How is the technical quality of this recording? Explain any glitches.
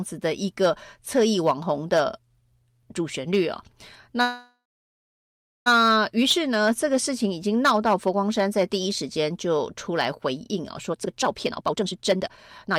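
The recording has three clear technical problems: constant clipping, one stall partway through, and a rushed stretch at the end.

Hard clipping runs through the whole speech clip. The signal is driven about 11 dB past what the chain can pass, so the loudest peaks are sliced flat. Only a small share of samples, around one or two percent, hit the ceiling. Each flattened top adds high harmonics, heard as a gritty crackle on emphatic syllables. Unlike codec distortion, the roughness follows loudness and leaves quiet passages clean.

A call audio freeze runs from 4.21 s to 5.68 s. The most likely cause is packets held up in transit, which left the receiver's jitter buffer empty. The receiver stretched the last sound into a fading buzz, then silence for about 1.08 s, filling 1.45 s in all. When audio resumes it picks up exactly where it stopped, with nothing lost. That is what separates it from a dropout, which would skip material. 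The pause instead pushes everything after it 1.45 s later.

Jitter buffer speed-up starts at 10.89 s and lasts to the end. Having built up that extra delay, the receiver catches up by cutting many short pitch-period slices, about a second of audio in total. Playback runs at roughly 152% speed, so the speech sounds hurried and clipped together. The pitch stays normal, with no chipmunk rise, which rules out a simple sample-rate or playback-speed error.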